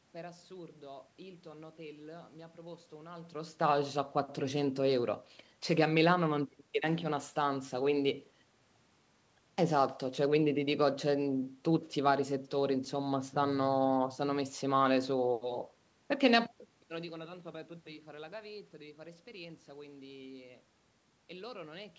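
Nothing here points to any technical fault.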